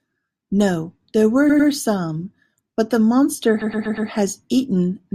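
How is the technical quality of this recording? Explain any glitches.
The recording has two stutters caused by repeated frames. At 1.49 to 1.69 s, just before "some but the monster", a 100 ms stretch plays twice more, adding 200 ms. At 3.61 to 4.09 s, right after "some but the monster", a 120 ms stretch repeats four extra times, adding 480 ms. Each is a run of compressed frames that was sent again, so the decoder replays that slice. The result is a choppy stutter.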